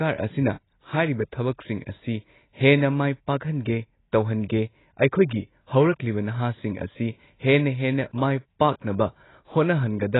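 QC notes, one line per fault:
throughout: AAC compression, heavy, likely a low-bitrate AAC-LC encode around 16 kbps; nothing above 3.9 kHz, so speech sounds dull and smeared, with fizzy sibilants.
8.59 s: pre-echo, a short hiss in the 10 ms before a sharp attack. Coding noise spread across the block fills the quiet gap and softens the onset.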